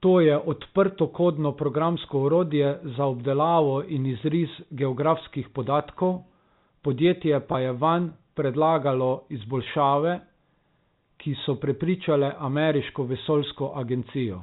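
A brief buzzy hold, as if the sound snags on one pitch, occurs at 7.52 to 7.54 s and again at 9.64 to 9.66 s. Both are packet loss with pitch repetition: 20 ms went missing, consistent with one lost packet, and the receiver bridged it by repeating the last pitch period.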